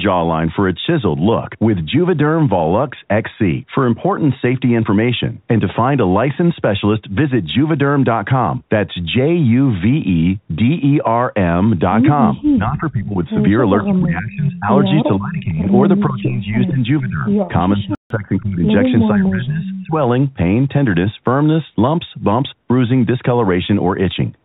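From 12.55 to 13.25, 13.81 to 14.69, 15.17 to 15.67, 16.08 to 16.83, 17.0 to 17.27, 17.77 to 18.65 and 19.13 to 19.95 s, the speech dips by roughly 15 to 20 dB. This is speech suppressed in double talk, likely the echo canceller turning down both talkers during overlap. At 17.95 s, a playback stall cuts the sound for about 150 ms before it resumes, likely from the player briefly running out of data. From 19.66 to 19.87 s, an echo leak lets a copy of the speech through, delayed by about 440 ms and sitting roughly 10 dB below it, likely residue the loudspeaker side's canceller missed.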